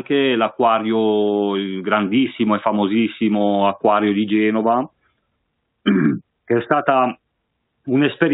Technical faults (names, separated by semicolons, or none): none